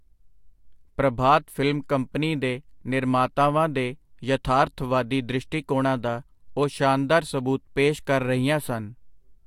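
No technical faults are audible.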